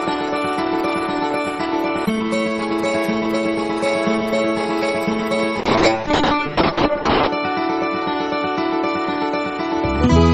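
At 5.61 s there's a call bitrate drop that lasts right to the end of the clip. The bandwidth estimate fell, and the encoder got squeezed from what sounds like around 32 kbps down to roughly 6 kbps. The top end shrinks from 20 kHz to 8 kHz, so everything goes muffled, and the coarser coding adds a rough, watery texture. It bottoms out for about 1.7 s and doesn't recover before the clip ends.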